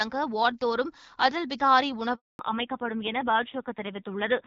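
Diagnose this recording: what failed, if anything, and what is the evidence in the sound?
Handover gap, 2.15 to 2.39 s, at the network stage. The speech dies away within a few tens of milliseconds and leaves 240 ms of silence before sound returns. That is the signature of a call being moved from one network to another: no speech frames reach the receiver while the link switches, so the decoder has nothing to play, and whatever was said in that window is gone rather than delayed.

Fallback to narrowband, from 2.39 s to the end, at the codec stage. When the speech resumes after the gap, nothing remains above 4 kHz. The voice is duller and rougher than in the first part of the call, where the HD Voice coding sounds clear with only light artefacts, consistent with AMR-WB at around 12.65 kbit/s. The new link renegotiated down to an older narrowband codec, and the roughness fits AMR-NB at a low rate near 5.9 kbit/s.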